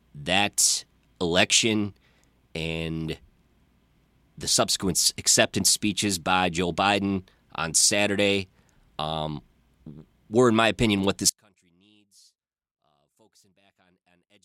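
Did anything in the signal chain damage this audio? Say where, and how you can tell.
Yes. From 11.29 s to the end at 14.45 s, right after "in my opinion what", the speech drops by about 38 dB to a faint residue. That is one channel inverted, likely from reversed-polarity wiring, so the centred voice cancels in the mono sum.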